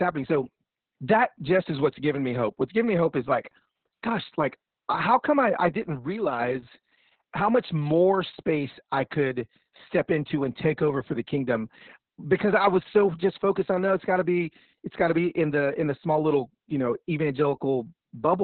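From start to finish, this speech is hit by Opus voice compression, and pretty heavily. Nothing comes through above about 4.3 kHz, so it's squeezed into narrowband, which points to the SILK coder running at a very low bitrate, something like 6 kbps. The excitation is coded so coarsely that the voice sounds muffled, hoarse and a bit robotic, and it is coded in long 60 ms frames.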